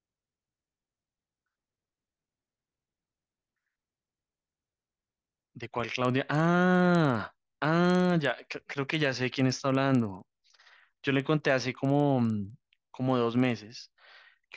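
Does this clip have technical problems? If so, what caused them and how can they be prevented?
Yes. A resampler restarted on every block leaves a 20 Hz buzz throughout the speech. Each 50 ms block was converted from 48 kHz to 16 kHz in isolation, leaving an error at every edge. Unlike mains hum, it falls silent in pauses. Carrying the resampler's filter state across blocks prevents it.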